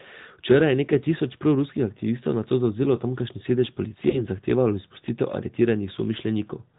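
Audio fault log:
Throughout: AMR narrowband mobile codec. The speech is cut off above 4 kHz, so it sounds thin and muffled. The coding damage is plainly audible, a buzzy, synthetic edge from modelling the voice with few pulses, which fits a mid-rate mode near 10.2 kbps.
4.10 to 4.21 s: lost AMR speech frame. One 20 ms frame failed its check and the decoder filled the gap by repeating the last good pitch and vocal tract settings at falling gain. The result is a brief dip or warble before the speech recovers, weak or rough for a moment.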